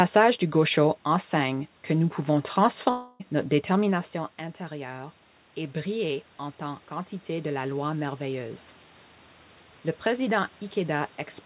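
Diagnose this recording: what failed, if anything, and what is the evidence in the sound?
Network stage: a long network dropout from 2.9 to 3.22 s, between "enseigne que nous pouvons" and "notre détermination". About 0.3 s never arrived, and the receiver stretched the last sound into a fading buzz or hiss that fills the whole gap, so there's no silence. Likely packet loss on the path.

Call processing: automatic gain rising from 4.68 to 8.66 s, right after "notre détermination". The input fell by about 13 dB after the talker leaned away near 3.5 s, and the AGC crept its gain up by about 6 dB, so voice and room noise swell together.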